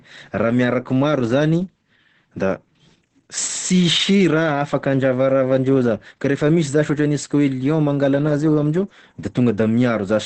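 Throughout the whole speech clip, Opus voice compression in its SILK mode leaves the voice muffled, hoarse and faintly robotic, consistent with a rate near 10 kbps. A spectrogram shows a flat ceiling, with nothing above about 8.6 kHz, and smeared, grainy harmonics below it.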